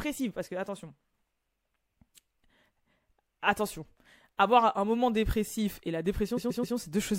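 A stutter cuts in at 6.36 s, just after "un moment dépressif": the same 130.6 ms slice of speech plays three extra times before it moves on at 6.76 s. These are repeated frames: a short run of compressed frames, which fits a block of five, was written or sent more than once, and the decoder played it again, lengthening the clip by 391.8 ms.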